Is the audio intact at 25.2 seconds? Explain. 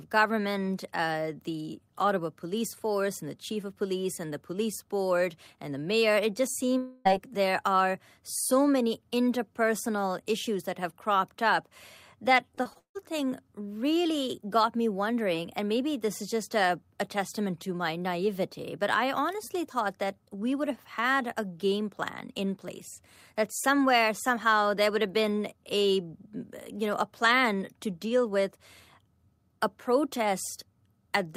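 Yes, the speech at 25.2 seconds is intact, with no dropout, click, distortion or other fault at that moment.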